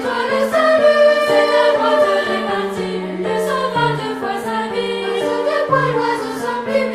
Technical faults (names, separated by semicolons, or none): none